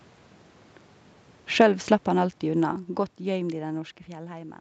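From 1.45 s to 3.83 s, automatic gain falling pulls the level down by about 13 dB. The gain control judged the input too loud, or its background noise too strong, and eased its gain down gradually. The speech starts loud, then steadily sinks, and the room noise beneath it sinks by the same amount. That shared drop separates it from the talker moving around 1 s and again near 4 s, where only the voice changes and the background holds steady.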